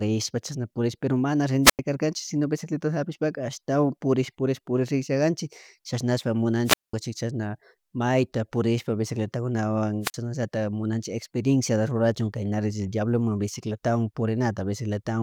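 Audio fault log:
1.63–1.79 s, 6.65–6.93 s and 10.02–10.14 s, wireless microphone squelch dropout: three times the analogue FM link fades, hiss swells briefly, then the receiver's squelch cuts the output to near silence before the speech returns. The mute lasts about 93 ms just before "kanchik sino", 201 ms right after "purish riksha kanchik chashnashspa", and 41 ms just before "chaknallatak munachik". The rising static is the weakening carrier, and the hole is the squelch gate closing.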